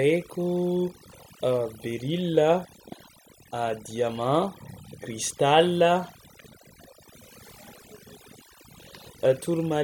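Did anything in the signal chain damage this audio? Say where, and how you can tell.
Yes. The damage sits at the call-processing stage, where overdone noise removal runs across the whole speech clip. The background between phrases collapses to near silence scattered with twinkling specks. A suppressor set too aggressively pulls individual frequency bands down or out whenever they sit close to its noise estimate, so low-level parts of the speech are stripped along with the noise, leaving isolated bins flickering on and off.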